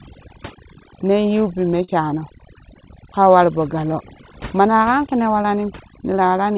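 Speech carried over a narrowband call path, with nothing audible above 4 kHz, consistent with a G.711-type codec. Overdone noise removal runs throughout: the reduction is set so aggressively that individual frequency bands near the estimated noise floor are pulled almost to nothing, taking the quieter parts of the voice with them. The background collapses into near silence dotted with twinkling artefacts. Short concealed packet loss occurs twice. At 1.84 to 1.90 s, roughly 40 ms of audio failed to arrive in time, and the receiver bridged the gap by extending the preceding sound before crossfading back, producing a brief smear. At 5.42 to 5.46 s, a further 20 ms gap is concealed the same way, heard as a short wobble.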